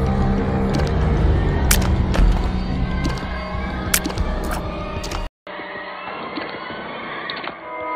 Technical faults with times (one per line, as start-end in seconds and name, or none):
5.27-7.95 input switched to a poorer device